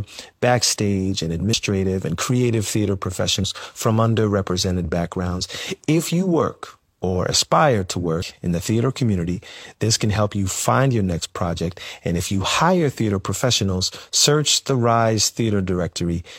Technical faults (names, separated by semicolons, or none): compressed frames skipped